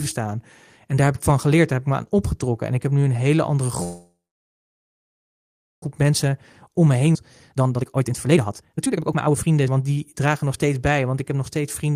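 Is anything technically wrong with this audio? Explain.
Yes, the call path broke down four times, with a stall, a jump and two bursts of catching up.

A call audio freeze runs from 3.83 to 5.84 s, right after "nu een hele andere". The most likely cause is packets held up in transit until the jitter buffer emptied. The receiver stretched the last sound into a brief fading tail, then went quiet for about 1.7 s. When the packets arrived, speech resumed exactly where it stopped. Nothing was lost, but roughly 2 s of delay was added.

Jitter buffer speed-up follows twice, at 6.67 to 7.08 s and at 7.48 to 10.75 s. Holding more audio than it aims for, the buffer trims short pitch-period slices over and over. The pitch stays the same while the pace rises. The first stretch runs at 112% and sheds about 50 ms, enough to sound hurried. The second runs at 140% and removes roughly one and a half seconds, so the speech sounds rushed.

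A skip ahead sits between them at 7.14 to 7.17 s. About half a second of speech was discarded while later audio was already queued. Playback leaps forward across an almost seamless join, so that piece of speech is simply missing.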